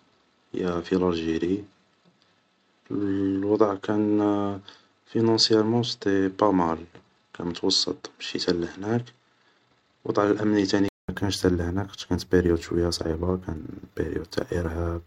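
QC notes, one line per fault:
0.00–11.09 s input switched to a poorer device: likely a narrower input, nothing above 8.2 kHz, dull until a 200 ms gap before "تا هناك خطش كانت".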